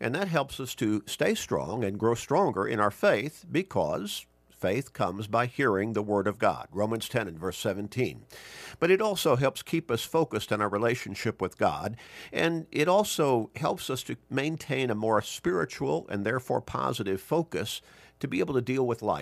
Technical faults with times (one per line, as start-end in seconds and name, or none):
none